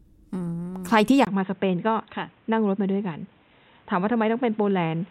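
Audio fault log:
1.25–5.11 s, input switched to a poorer device: after a 20 ms gap the speech turns dull and boxy, with nothing above 3.9 kHz, about 5 dB quieter, over a new noise floor. This is likely another microphone; a mere filter brings no gap or fresh noise.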